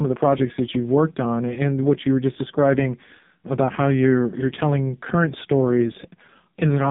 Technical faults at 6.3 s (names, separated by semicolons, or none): AMR narrowband mobile codec